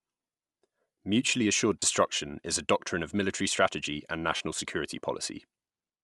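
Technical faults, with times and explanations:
Throughout: Bluetooth LC3 compression. The speech has a plainly audible breathy, grainy edge in the upper range, likely from LC3 coding at a rate that fits about 48 kbps. The codec zeroes much of the high spectrum and refills it with noise.
1.80–1.82 s and 4.36–4.40 s: lost LE Audio frames. Short noisy smears replace the speech for about 22.5 ms and 37.5 ms, fitting three and five lost 7.5 ms frames. The decoder repeats the last spectrum with random signs, blurring the tone into noise.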